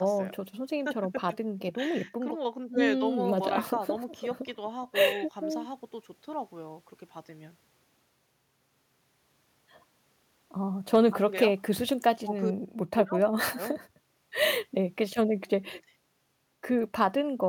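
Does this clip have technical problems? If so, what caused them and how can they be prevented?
No, there's nothing wrong with this speech clip on the technical side, so there's no cause to track down and nothing you need to prevent.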